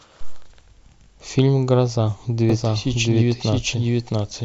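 A speech clip with a doubled audio track from 2.50 s to the end: a full-band copy, about as loud as the original, trails it by roughly 0.7 s, likely from a second, slower capture path. On a spectrogram, every formant pattern repeats after that gap, and the waveform shows the copy starting abruptly.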